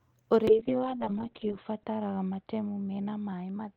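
At 0.48 s a call bitrate drop sets in and lasts to the end. The call's bandwidth estimate fell, so the encoder had to spend far fewer bits. The coding turns coarse and rough, with a watery smear on the speech. High frequencies vanish as the audio band narrows from 20 kHz to about 4 kHz, leaving it muffled. The sound fits a fall from roughly 32 to 6 kbps. The worst stretch lasts about 1.2 s, and quality does not fully recover before the clip ends.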